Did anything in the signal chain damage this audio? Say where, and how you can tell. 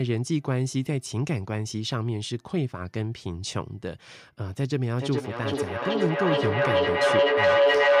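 Yes. From 4.98 s to the end of the clip at 8 s there is a feedback howl, a fault in the call path where two devices share a room. Sound from one loudspeaker re-enters the other's microphone, gains level on each trip, and narrows to a tone near 500 Hz, pulsing roughly every 0.4 s at the loop's delay and peaking about 6 dB above the speech. A spectrogram shows a bright horizontal line that strengthens over time, and the waveform envelope swells in regular pulses.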